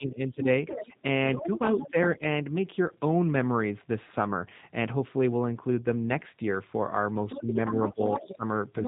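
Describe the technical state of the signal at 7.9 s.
At 7.9 s the other side's voice is leaking through, within a stretch running from 7.29 s to the end of the clip. A second voice sits underneath the talker, only a little quieter than the main speech. This is likely acoustic echo: the far end played on the talker's loudspeaker, picked up again by the microphone, and not fully removed by the echo canceller. The leaked voice arrives at nearly the talker's own level, so it is clearly audible alongside the speech rather than buried.

The same moment falls inside a speech-suppressed-in-double-talk span from 7.4 s to 8.45 s. With both sides talking at once, the echo canceller likely could not separate the talker from the loudspeaker echo and turned the microphone signal down. The talker's speech dips in pieces, falling by up to about 15 dB, and these losses add up to roughly a third of a second across the span. 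The result is a choppy, intermittently hollowed-out voice while the leaked second voice carries on.

The G.729 codec runs under all of this, and its damage is plainly audible. The band stops at 4 kHz, which leaves the speech muffled and lacking sibilance. Each 10 ms frame is rebuilt from a vocal tract filter, a pitch predictor and a few pulses, so the voice comes out rough and slightly synthetic, consistent with an 8 kbit/s codec.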